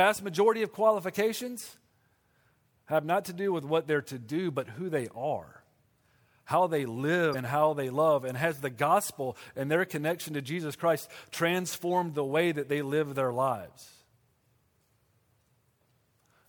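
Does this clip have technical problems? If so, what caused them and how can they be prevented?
Yes. At 7.30 to 7.35 s the speech is broken by a brief glitch of about 44 ms, caused by damaged data in a compressed stream. A stretch of the encoded bytes was corrupted, so the decoder misread those frames, lost sync and hunted for the next valid frame header before resuming. Storing and transmitting files with checksums or error-checked transport prevents it.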